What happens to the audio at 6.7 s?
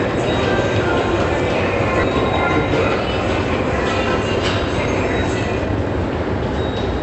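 Nothing goes wrong at 6.7 s; the sound stays intact there, carried through the call path with its band limited to about 8 kHz as throughout.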